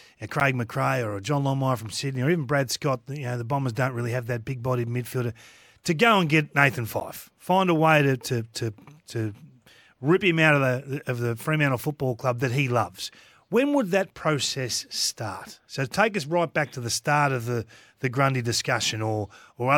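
At 0.40 s and again at 7.00 s the speech drops out for about 10 ms in a block of digital silence. A run of samples was replaced by silence, most likely because the output buffer was not filled in time. The signal stops and restarts with no fade, so each gap is heard as a short tick or dip. Unlike a fade-out dropout, the cut is abrupt.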